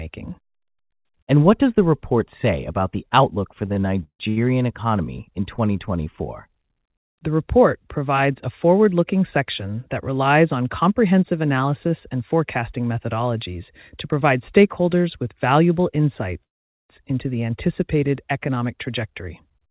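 From 3.66 to 4.39 s the speech shows repeated stalls (stutter). Packets arrived late four times, and the jitter buffer ran dry each time. The receiver stretched the last sound over 275 ms in total, the longest wait 161 ms. The speech drags and catches.

At 16.44 s a call audio freeze begins and lasts until 16.91 s. The sound holds briefly, then drops to silence for about 450 ms. The likely cause is packets held up in transit, emptying the buffer. The speech then resumes where it stopped, with nothing lost.

From 18.49 to 19.68 s a jitter buffer speed-up follows. The buffer had built up excess audio, so the receiver trimmed many tiny pitch-period slices, around a tenth of a second altogether. Speech runs at about 108% speed with unchanged pitch, sounding hurried. Throughout, nothing is heard above 4 kHz, which fits a narrowband call codec such as G.711.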